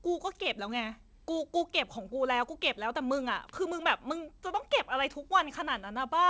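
Listening to this speech recording, nothing stood out as a technical problem.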